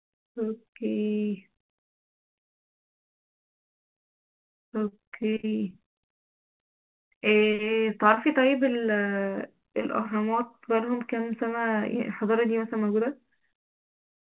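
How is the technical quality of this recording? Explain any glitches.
The recording carries four separate glitches, all from packet delivery problems on a call link. The whole clip is band-limited, with nothing above 4 kHz, which fits a G.711 mu-law call path at 64 kbps.

From 4.88 to 6.11 s there is repeated packet loss, giving a robotic sound. About ten short holes open in the stream, the longest 36 ms. Each one is patched by extending the preceding sound. In total 204 ms is synthesized, about 17% of that stretch, and 140 ms of real audio is gone. The speech turns choppy, with fragments missing.

Between 7.18 and 7.22 s there is a short stall from a late packet. A packet arrived after it was due and the jitter buffer ran dry. The receiver held the last sound for 20 ms until the data came in, then resumed at the same point. Nothing is lost. The effect is a brief held tone, and the playout delay grows by 20 ms from there on.

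From 8.14 to 8.19 s there is a short concealed packet loss. A 20 ms piece of speech never reached the decoder, and the receiver filled it by extrapolating from what came just before, then crossfaded back into real audio. That 20 ms of actual content is gone. It is heard as a small smear.

From 12.76 to 13.25 s there is a jitter buffer speed-up. The buffer had collected more audio than its target, so the receiver trimmed it by cutting out many pitch-period-length slices, roughly 50 ms in total. Playback runs about 9% fast over that half second while the pitch stays unchanged. The speech sounds slightly hurried there.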